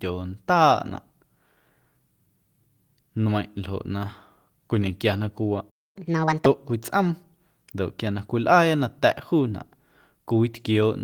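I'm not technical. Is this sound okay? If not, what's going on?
No. At 5.70 s the speech cuts out completely for about a quarter of a second. That's a playback stall: the player most likely ran out of incoming audio, or got held up, and had nothing to play until it recovered.

Right after, from 5.96 to 6.46 s, you'll hear catch-up at higher speed. The player runs the delayed audio at 1.5 times normal speed to make up the lost time, so it sounds rushed and noticeably higher, a bit over half an octave, then settles.

During that sped-up stretch, around 6.25 to 6.29 s, there's also a short concealed packet loss. About 20 ms of audio never arrived, and the receiver filled the gap by stretching the sound just before it. It's a brief smear or wobble.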